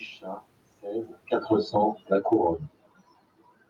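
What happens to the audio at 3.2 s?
Nothing goes wrong at 3.2 s; the audio is intact at that point.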